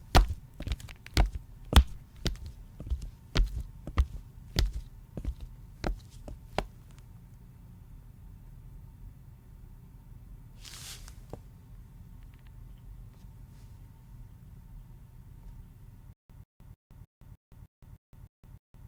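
An everyday-sound recording that breaks into a stutter with silent gaps from 16.13 s to the end: a 139 ms fragment repeats nine times, each followed by 167 ms of digital silence, every 306 ms, likely from a stalled stream replaying its last buffer. Unlike a seamless loop, dead silence separates each repeat.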